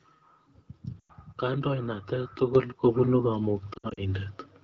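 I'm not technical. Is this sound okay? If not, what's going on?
No. Twice the speech briefly breaks up. At 1.00 s it smears and dips for about a tenth of a second, then returns a little weak and rough. From 3.73 to 4.08 s it stutters on and off several times, each gap short. These are lost AMR speech frames: radio errors damaged small chunks of the phone signal, so the decoder filled each gap by stretching the last good sound and fading it down.

The level also jumps twice: clearly louder at 2.55 s, then a smaller step up at 3.57 s. Voice and background rise together, all at once. That is the microphone volume stepped up: the call software decided the microphone was too quiet and turned its input up in a single step rather than gradually.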